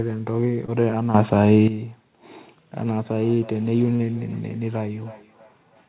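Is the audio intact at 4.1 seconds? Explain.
No. At 4.1 s you're inside a stretch of feedback echo between two devices that starts around 2.75 s and runs to the end. A second device in the room replays the call and this mic picks it back up, so the sound returns about every third of a second, thinner and ringier, peaking roughly 24 dB below the speech. Just before that, 3.96 to 4.02 s has a short concealed packet loss: 40 ms never arrived and was patched by extending the previous sound, leaving a brief smear.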